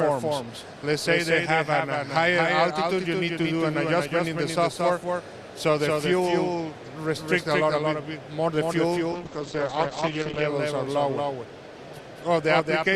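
From the first moment to the end, every sound is followed by a second full-band copy about a fifth of a second later and a few dB quieter: a doubled audio track. The likely cause is the same signal reaching the mix twice, once through a slower path or out-of-step edit. Unlike room reverb or acoustic echo, the repeat has no decay tail, no change in tone and no further repeats. It is one clean, steady duplicate.

From 9.14 s to 10.53 s the sound turns rough and watery, and the top end closes in from the full 20 kHz range down to about 8 kHz. It stays at its worst for about 1.33 s before clearing. This is a call bitrate drop. The encoder was squeezed onto far fewer bits, which fits a fall from around 48 kbps to around 9 kbps, so it coded more coarsely and discarded the highs. Packet loss would leave gaps or glitches. Here the audio runs continuously but is smeared and muffled throughout the stretch.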